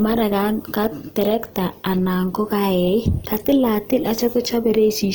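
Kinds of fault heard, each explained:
Opus compression: The speech carries a plainly audible grainy, rough texture throughout. This fits the codec's music (CELT) mode at a low rate around 24 kbps, its likely cause. Starved of bits, CELT keeps each band's energy but fills missing detail with noise or folded lower bands. A spectrogram shows content up to about 20.2 kHz with few holes but smeared fine structure.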